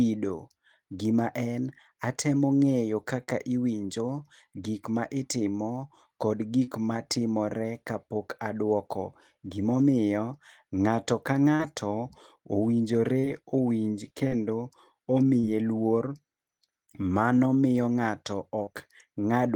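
Right after "gima en atemo ng'eyo" at 3.23 s there's a short concealed packet loss. About 40 ms of the call didn't reach the decoder in time, so the receiver patched the hole by carrying the previous sound forward for roughly 40 ms and then easing back into the real audio. You hear it as a quick smear or wobble. The same thing happens at 6.64, 11.55, 13.19 and 15.40 s, and again just after "miyo ng'ato" at 18.63 s. Each one is a similar little blip, and a short sound can get swallowed.

At 14.27 s there's a burst of packet loss running to about 14.35 s. Here the stretch that went missing was treated as one longer gap of about 40 ms of lost audio. The receiver extended the last sound for around 45 ms and turned it down as it went, so it comes across as a held, fading tail. The audio then picks up further along, and the bit in between is simply gone.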